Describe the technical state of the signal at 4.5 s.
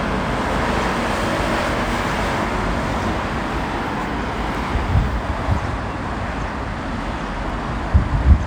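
At 4.55 s there is a skip: audio missing between chunks. About 50 ms vanishes and the edges join directly. Likely cause: losses at 3-second chunk boundaries.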